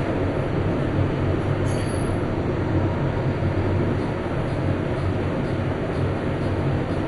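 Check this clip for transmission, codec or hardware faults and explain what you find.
There is one fault, present for the whole clip: heavy MP2 compression damage. The sound is dull, with nothing above 11.2 kHz, and carries a gurgling, granular roughness. This is likely caused by MPEG Layer II coding at a low rate, around 56 kbps. That codec divides the spectrum into 32 equal sub-bands and shares out bits among them. Starved of bits, it shuts off the upper bands entirely and quantises the remaining ones coarsely. As bands drop in and out, the texture churns. On a spectrogram there is a flat ceiling at 11.2 kHz, and below it blocky patches of energy flicker on and off in band-shaped strips. The waveform looks grainier than a clean signal would.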